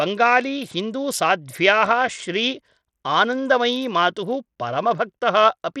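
A short speech clip with plainly audible codec damage from start to finish: the upper frequencies flicker in and out, and a rough, grainy noise sits on the sound. This points to Bluetooth SBC compression, likely at a low bit pool, which fits a rate around 80 kbps. Starved top sub-bands get few or no bits, so a spectrogram shows treble breaking into patchy, blocky fragments with smeared aliasing energy, while the waveform looks unremarkable.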